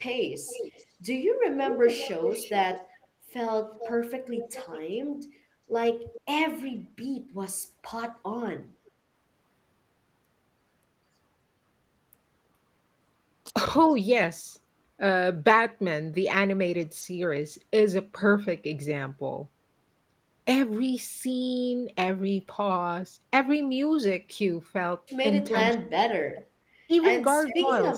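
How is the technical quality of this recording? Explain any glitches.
The recording has two kinds of call-processing glitch: echo leaking back and speech being suppressed when both sides talked.

Echo leak: the far end's echo canceller likely let some loudspeaker pickup through. From 0.46 to 4.79 s a delayed copy trails the speech by about 410 ms, around 10 dB down. Fainter scraps, roughly 15 to 20 dB down and 413 to 430 ms late, appear at 6.13–6.21, 26.35–26.42 and 27.48–27.55 s.

Speech suppressed in double talk: from 25.52 s to the end, the canceller likely mistook the talker for echo while both sides spoke and attenuated both the talker and the echo. The speech dips sharply, at its deepest by around 40 dB.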